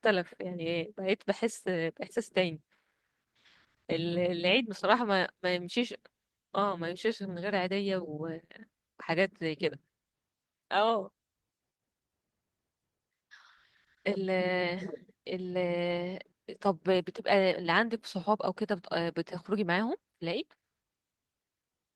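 No dropouts, clipping, glitches or other transmission faults turn up anywhere in the speech.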